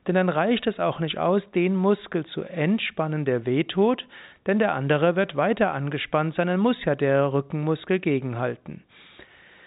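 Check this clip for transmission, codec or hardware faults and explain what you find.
No faults found.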